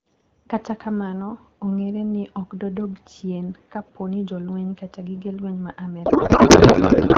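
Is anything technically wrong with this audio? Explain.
Yes. A codec payload misread runs from 6.05 s to the end of the clip at 7.18 s, just after "kata gige lweny ma". The sending and receiving ends have stopped agreeing on how the AMR bits are packed, which fits octet-aligned frames being read as bandwidth-efficient. The decoder accepts each frame but takes its fields from the wrong positions. The speech gives way to garbled noise and warble that barely tracks it, in contrast to the clear AMR-WB speech at 12.65 kbit/s before it.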